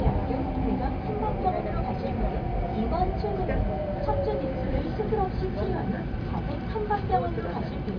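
No technical faults can be heard in this sound recording.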